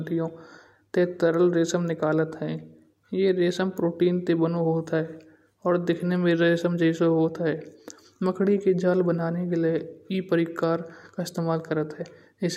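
No technical faults can be heard in the speech.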